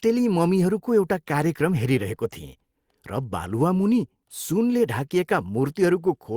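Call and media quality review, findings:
No faults observed in the speech signal; level, continuity and timing show no technical issues on review.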